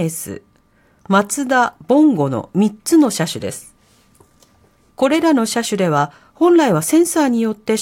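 No technical faults detected.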